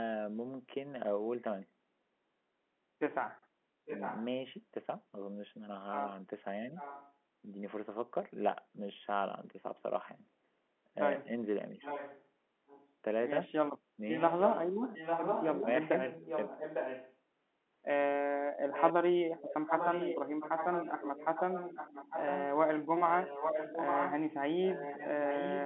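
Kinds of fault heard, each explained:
Echo leak: A delayed copy of the speech comes back about 850 ms after the original. It appears at 3.85 to 4.25 s, 6.76 to 7.13 s, 11.85 to 12.88 s, 14.18 to 17.16 s, 18.73 to 22.45 s and 23.07 s to the end. Early returns sit roughly 10 to 15 dB under the speech. Later ones grow to about 5 dB under it. The likely cause is a loudspeaker on the far end whose echo canceller let its own pickup through.
Speech suppressed in double talk: At 11.76 to 11.83 s the speech briefly dips. The drop is shallow, about 5 dB, and lasts roughly 70 ms. It comes just before the echo at 11.85 s. The likely cause is an echo canceller that heard both sides at once. It could not tell the talker from the returning echo and turned both down. Here that shows as a short, slight sag in level rather than a full cut.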